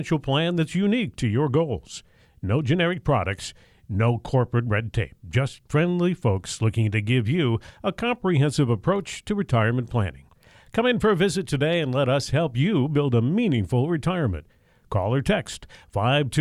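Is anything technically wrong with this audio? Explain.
No, nothing is technically wrong with this audio. The speech comes through with no technical fault anywhere in the clip.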